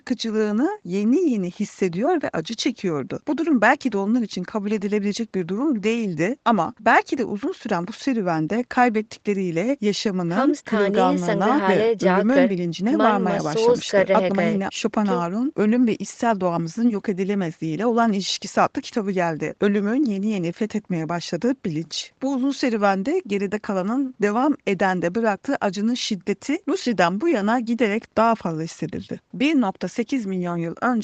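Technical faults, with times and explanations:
No faults found; the speech is band-limited to about 8 kHz, as expected from a call microphone and codec path.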